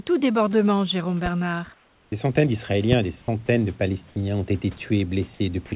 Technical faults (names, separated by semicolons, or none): loud pop; comfort noise in place of the background; onset clipped by the voice detector; sound dropped by the voice detector